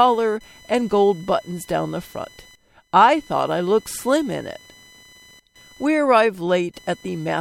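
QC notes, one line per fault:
Throughout: computer activity noise, a buzz pulsing near 1 kHz about 30 dB below speech, load changes shifting shared ground; spectrogram shows dense vertical striations.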